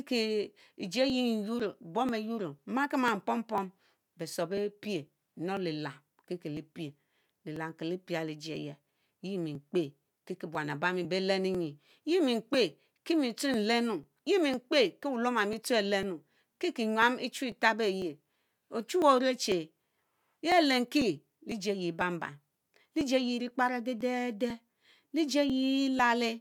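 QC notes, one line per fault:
0.10 to 25.99 s, periodic USB or driver dropouts. A small slice of the speech goes missing every 0.50 s, about fifty times in all. Each gap is roughly 2 ms long. The audio is skipped, not padded with silence, so the waveform jumps abruptly at each join. That jump is heard as a regular tick. The evenly spaced timing points to a background task stalling the USB bus or audio driver on a fixed cycle.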